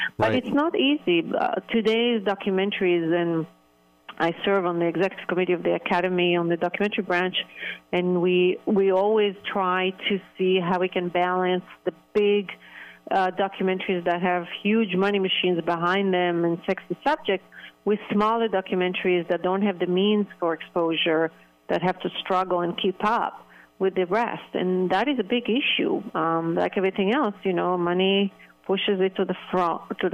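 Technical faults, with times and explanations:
No technical faults detected.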